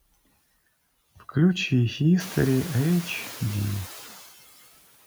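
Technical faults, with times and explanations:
Throughout, noise suppressor artifacts: bands read as steady noise drop about 15 dB frame by frame, so room noise sinks between phrases and resurfaces under speech.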